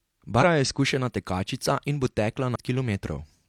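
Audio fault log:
0.38–0.44 s, 2.51–2.56 s, 3.30–3.35 s: compressed frames skipped. Runs of roughly four, fifteen and five 46.4 ms frames never reach playback, so the speech jumps ahead about 0.2 s before "je izkušena tekačica in", about 0.7 s after "izkušena tekačica in bo", and about 0.2 s near the end.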